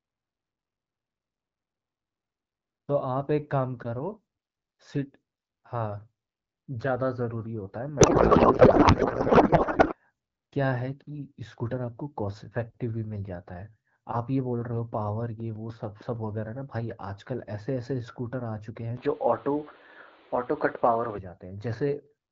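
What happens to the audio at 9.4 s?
At 9.4 s the clip is inside a codec payload misread lasting from 8.00 to 9.95 s. The speech gives way to garbled noise and warble that barely tracks it, which fits octet-aligned AMR frames being unpacked as bandwidth-efficient, putting every field at the wrong bit offset.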